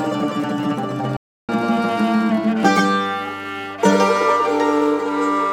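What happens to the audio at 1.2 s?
A playback stall runs from 1.17 to 1.49 s, likely because the player ran short of buffered data or its output thread was held up. The sound cuts off abruptly mid-flow, leaving a 320 ms gap of silence before it picks up again.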